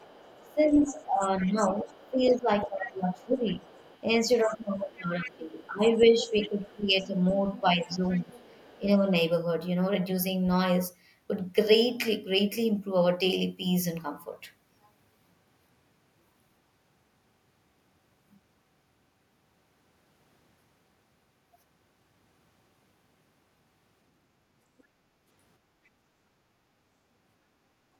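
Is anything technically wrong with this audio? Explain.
Yes, there are echo-cancellation faults in this speech.

Other side's voice leaking through, 0.0 to 2.67 s, 3.47 to 4.01 s, 5.25 to 8.8 s and 24.78 to 24.83 s: the far end was likely played on a loudspeaker that the microphone picked up, and the echo canceller left part of it in. A second, fainter voice sits under the talker, around 20 dB down in the first and third stretches, weaker at 3.47 s, and only a brief, very faint trace near 24.8 s.

Speech suppressed in double talk, 0.0 to 8.88 s: with both ends talking at once, the canceller likely could not separate the local talker from the loudspeaker echo, so it turned everything down together. Over about five seconds in total, the talker's level sags and pumps, dropping by as much as about 15 dB at its deepest, so stretches of speech sound pushed back and uneven.

Background gated by the echo canceller, 25.61 to 25.83 s: while the loudspeaker was active, the canceller clamped the microphone path hard. 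For about a fifth of a second the room tone dips by about 6 dB, leaving a short hole in the ambience before it comes back.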